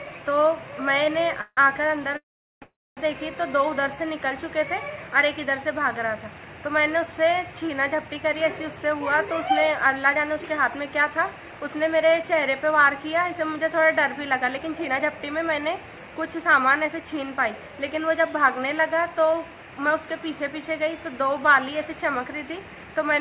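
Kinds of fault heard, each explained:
call audio freeze: At 1.41 s for 0.17 s, then 2.17 to 2.98 s in two back-to-back stretches of 0.45 and 0.34 s, the last sound is held as a fading buzz that drops into silence, then resumes where it stopped, likely because delayed packets emptied the jitter buffer.
jitter buffer speed-up: From 7.93 to 12.23 s the sound runs about 5 percent fast, trimming roughly 0.2 s, and from 14.26 to 19.34 s about 7 percent fast, trimming roughly 0.3 s. Repeated removal of tiny pitch-period slices makes it hurried without raising pitch.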